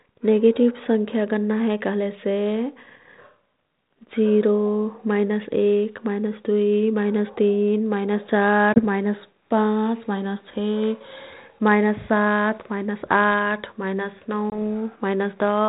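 Packet loss on an ADPCM call strikes at 8.74 to 8.80 s and again at 14.50 to 14.59 s. Each time about one packet, 20 ms of speech, drops out as a hard-edged hole of silence. Because the decoder's adaptive predictor and step size lose track of the sender's, the speech comes back briefly with some distortion before resyncing. The band-limited telephone sound around it points to G.726 ADPCM at 32 kbit/s.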